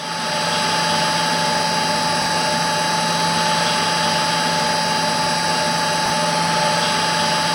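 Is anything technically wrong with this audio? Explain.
Yes. There are two brief chunks-out-of-order faults, from 2.22 to 2.26 s and from 6.06 to 6.10 s. In each, a 20 ms chunk of the sound arrived or was written one chunk late, so it plays after the chunk that should follow it. The two chunks trade places, leaving three hard joins within 40 ms and a short jumbled moment. Unlike a dropout, nothing is missing, and unlike a stutter, nothing repeats. The material is all there but in the wrong order.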